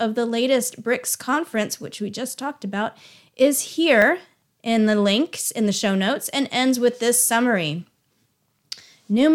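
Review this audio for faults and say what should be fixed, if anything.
The speech jumps ahead with no gap at 4.02 s, after "just talked about is", and at 5.46 s, between "in the" and "in the show notes", each losing roughly 20 ms. The likely cause is a dropped buffer (overrun): samples were overwritten before being read, and the remaining audio was joined directly. A larger capture buffer or higher priority for the recording thread would let it read in time.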